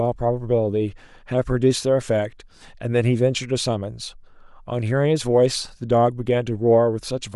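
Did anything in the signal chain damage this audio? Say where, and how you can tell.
Yes. Bluetooth LC3 compression runs throughout the speech, and the damage is plainly audible, so the stage is the codec, most likely an LE Audio link. The upper band sounds breathy and grainy rather than clean, as if detail there has been swapped for shaped noise. That fits a transform codec working on short 7.5 ms frames at around 48 kbps, discarding much of the high spectrum and noise-filling the gaps.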